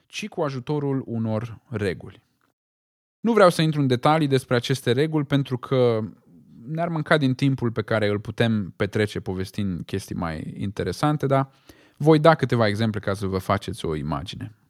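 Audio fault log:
0.34 to 2.1 s, automatic gain rising: the level swells by about 7 dB over almost two seconds. The gain control judged the input too quiet and pushed its gain up step by step. Speech and background noise grow louder together.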